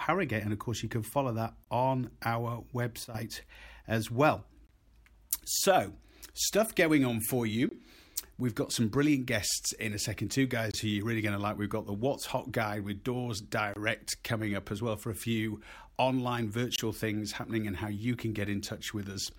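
Speech, interrupted by a gap between chunks at 1.64, 4.67, 7.69, 10.71, 13.74 and 16.76 s. Each is a hard-edged hole of about 23 ms, repeating every 3.0 s. That regular spacing fits audio delivered in 3-second chunks with silence inserted at each join, from codec padding or a player that starts each chunk late. Between 3.04 and 3.15 s there is a sudden gain jump: the speech and its background noise drop together by about 12 dB in a single step with no ramp. The likely cause is a digital gain setting or bit shift applied instantly rather than faded in.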